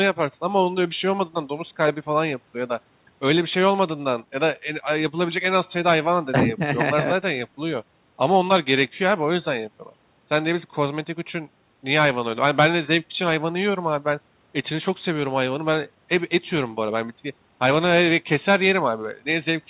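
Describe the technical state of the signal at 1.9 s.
At 1.9 s the speech is intact, with no dropout, click or distortion; the call path simply leaves nothing above 4 kHz, as it does throughout.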